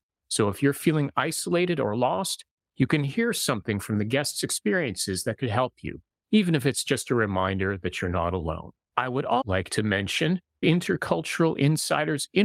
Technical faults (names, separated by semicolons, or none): none